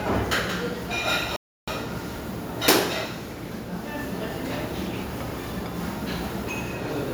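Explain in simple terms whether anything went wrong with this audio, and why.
The player most likely ran short of data or was held up for a moment, a playback stall. Because of that, the sound cuts out abruptly at 1.36 s and stays silent for about a third of a second, about 0.31 s, before picking up again at 1.68 s.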